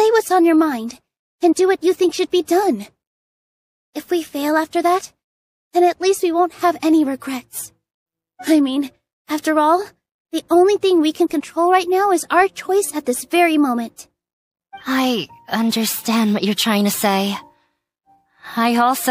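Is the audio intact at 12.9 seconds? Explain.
Yes, at 12.9 seconds the audio is intact, with no dropout, glitch or other fault audible at that point.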